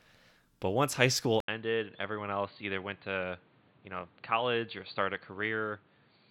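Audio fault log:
1.40–6.30 s, input switched to a poorer device: an 80 ms flat gap in the waveform, then the spectrogram is empty above 4.6 kHz, so the speech turns dull. It is also a few dB quieter over a faint new noise floor, likely from a narrower-band microphone.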